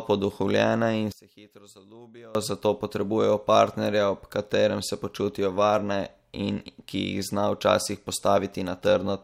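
One channel inverted, 1.12–2.35 s, between "poduhovljene in" and "zato potrebujejo": the speech falls about 24 dB, likely as reversed polarity cancels the centre.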